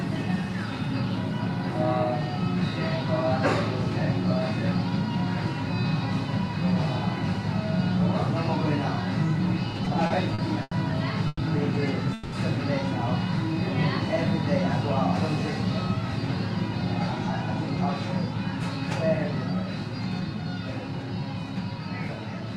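From 9.71 to 10.73 s, repeated stalls (stutter) break up the sound. Eight short gaps, the longest 90 ms, fill 220 ms with continued sound. Late packets kept emptying the buffer.

At 11.27 s, a call audio freeze holds the last sound for 120 ms, ending in 20 ms of silence. At 12.13 s, another freeze holds it for 190 ms. Both likely come from packets held up in transit, then resuming without loss.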